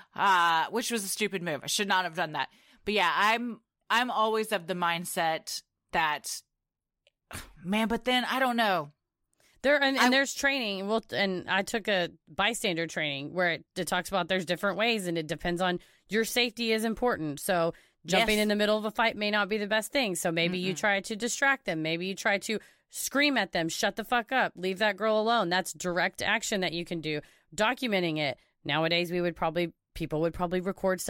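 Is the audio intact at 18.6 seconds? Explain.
Yes, at 18.6 seconds the speech is intact, with no fault present at that moment.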